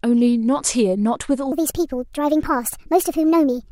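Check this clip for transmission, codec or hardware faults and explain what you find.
One fault, a wrong sample rate, runs from 1.52 s to the end of the clip. From that point the speech jumps up by about 5.5 semitones and runs 1.38 times faster, because the samples are clocked out faster than they were captured with no resampling in between. The ratio fits 32 kHz material played at 44.1 kHz. The voice sounds high, thin and hurried. On a spectrogram, harmonics and formants step upward by that ratio at 1.52 s, and waveform cycles become visibly shorter.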